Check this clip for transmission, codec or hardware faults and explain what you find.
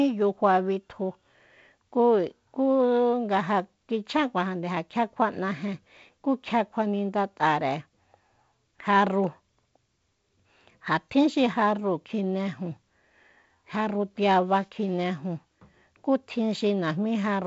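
Nothing stood out on listening to this speech, which is carried by G.722 wideband telephone coding with its highest content stopping at about 7.7 kHz.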